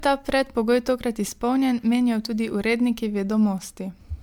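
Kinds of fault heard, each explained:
Generation loss: the speech has a swirly, hollow, smeared quality with blurred attacks, likely from MP3 re-encoding about four times, which fits 128 kbit/s passes.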